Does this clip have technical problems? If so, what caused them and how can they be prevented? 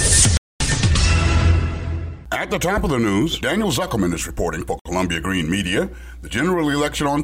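Yes. The audio drops to silence twice, from 0.37 to 0.60 s (about 230 ms) and from 4.79 to 4.86 s (about 60 ms). Both gaps are most likely a Bluetooth stall: radio interference delayed packets on the wireless link, the headphones' playback buffer emptied, and output paused until retransmitted data arrived. To prevent it, keep the phone and headphones close with a clear line of sight, away from crowded 2.4 GHz sources such as Wi-Fi routers.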